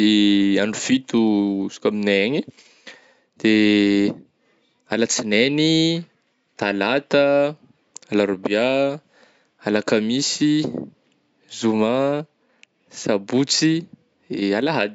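Nothing technically wrong turns up in this speech recording, which simply carries the usual character of call microphone processing, with the lowest bass trimmed and nothing above 8 kHz.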